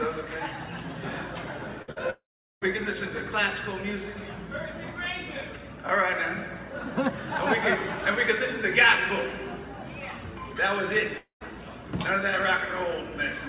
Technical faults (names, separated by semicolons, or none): burst of packet loss; long network dropout